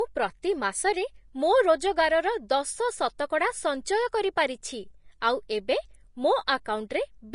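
Throughout the speech, low-bitrate encoding, likely Vorbis compression, has stripped everything above 10.6 kHz and quantised the remaining treble coarsely, which fits a rate near 33 kbps. The top end turns hissy and grainy, consonant attacks blur, and tones sound roughened.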